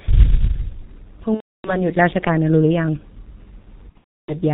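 From the start, the speech passes through a G.723.1 codec at a rate that fits roughly 6.3 kbit/s, and the damage is heavy. The codec rebuilds the voice from a coarse model refreshed only every 30 ms, so consonants smear and the tone turns muffled and hoarse. On a spectrogram everything above 4 kHz is empty, and the harmonics look blocky and smeared from frame to frame instead of tracing smooth curves.

From 1.35 to 1.88 s comes VoIP packet loss concealed by the speech codec. About 300 ms of audio went missing, which fits ten 30 ms frames. The decoder filled the gap by repeating its last pitch and filter settings at falling gain, so the speech stretches briefly into a fading buzzy tone or coloured noise, which is muted from the third lost frame in a row. The waveform shows a short shrinking burst followed by silence, and the spectrogram shows frozen structure that quickly drops away.

From 3.89 to 4.36 s the same packet loss concealment returns. 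About 360 ms is lost across a 420 ms stretch, with the longest unbroken gap around 300 ms. Scattered real frames break up the concealment, giving a choppy mix of frozen sound, muting and weak, distorted speech. On the spectrogram, dim, flat patches alternate with brief fragments of normal structure.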